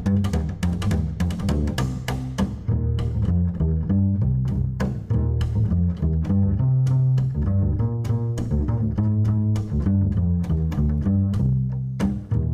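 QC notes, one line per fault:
Nothing to flag here; the audio holds up with no faults heard anywhere along its length.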